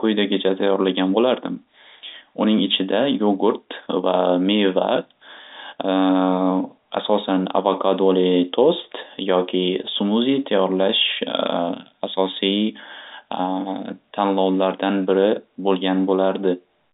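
No technical faults can be heard anywhere in this speech.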